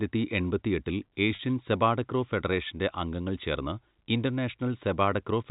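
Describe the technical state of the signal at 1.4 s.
Packet loss with pitch repetition occurs from 1.35 to 1.39 s, just before "സെപാടക്രോ ഫെഡറേഷന്റെ അംഗങ്ങൾ ചേർന്ന്". About 40 ms of audio went missing, consistent with a run of four 10 ms packets. The receiver bridged the gap by replaying the last pitch period it had, so the voice briefly freezes into a slightly held, buzzy tone before normal speech resumes. The surrounding G.711 A-law telephone band is audible, capping content at 4 kHz.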